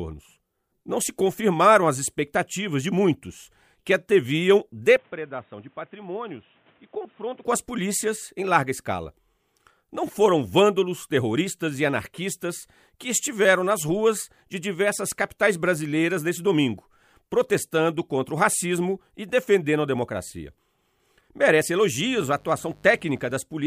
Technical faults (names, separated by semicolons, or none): input switched to a poorer device; mains buzz